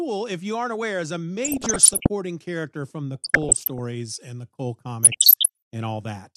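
DAB burbling hits at 1.45–2.07 s (after "aren't aware is a"), 3.15–3.79 s (after "character from the") and 5.03–5.49 s. With bit error rates of roughly 0.7 to 1.5 percent, some errors get past error correction, so individual sub-bands jump in level frame by frame. The result is short blips of noise in single sub-bands over the speech. A spectrogram shows scattered blocky band patches flickering on and off.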